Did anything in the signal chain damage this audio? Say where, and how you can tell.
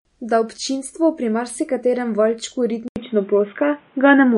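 Yes. The codec stage was likely MP3 compression at a low bitrate: nothing survives above 10.6 kHz throughout, and the speech swirls with a watery sound.

At 2.88 s the input likely switched to a poorer device: after an 80 ms silence, the band stops at 3.8 kHz, the level shifts about 5 dB, and new background noise appears.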